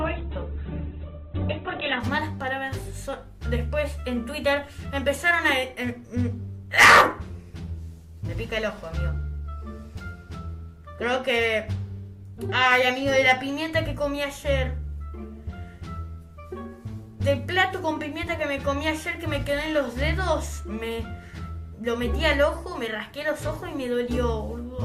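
From 0.0 to 2.0 s the sound shows an adaptive stream starting at a low bitrate: nothing above 4.1 kHz, with stronger codec artefacts that fit Opus near 8 kbit/s. At 2.0 s it steps up abruptly, without a gap, to fuller quality suggesting 64 kbit/s.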